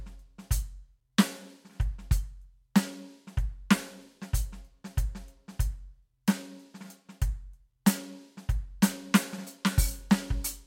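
The music runs without any audible technical fault at any point, with no dropouts, level disturbances or other disruptions to the signal.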